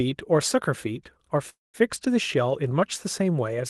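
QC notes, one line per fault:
1.49–1.76 s, call audio freeze: the speech halts, its last instant stretched into a buzzy hiss that fades to about 0.17 s of silence, then resumes exactly where it stopped. Nothing is lost, but everything after runs about 0.24 s late. The likely cause is delayed packets emptying the jitter buffer. On a spectrogram, a smeared, decaying copy of the last frame gives way to a blank gap under the 12 kHz ceiling of the Opus call path. The waveform shows a tapering tail, then a flat line.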